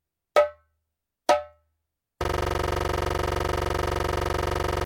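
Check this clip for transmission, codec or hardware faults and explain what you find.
One hardware fault is present: a system hang loop from 2.24 s to the end of the clip. At that point the host or driver stopped supplying new data, while the audio interface kept replaying the same ring buffer. A 42.67 ms segment repeats about 60 times, which fits a 2048-sample buffer. The exact repetition at 23.4 Hz replaces the normal sound with a rapid, machine-gun stutter that never recovers.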